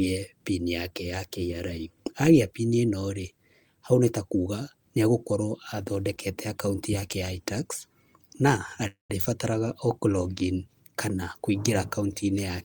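It's a speech recording with a call audio freeze at 8.87 to 9.11 s, right after "yake ya itax na": the last sound hangs on as a fading buzz, drops to silence for about 140 ms, then carries on with nothing lost, now about 223 ms late. Likely delayed packets draining the jitter buffer.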